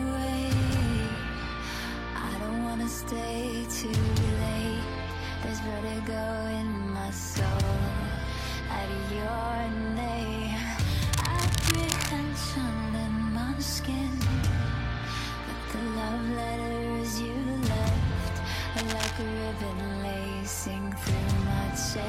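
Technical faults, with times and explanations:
11.13 to 12.13 s and 18.76 to 19.22 s, cable scratch noise: a worn cable or connector was likely disturbed, its shifting contact adding dense, uneven scratching bursts nearly as loud as the sound itself.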